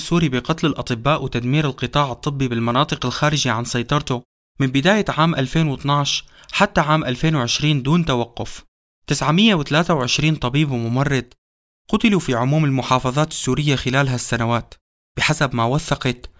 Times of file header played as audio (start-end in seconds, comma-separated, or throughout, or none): none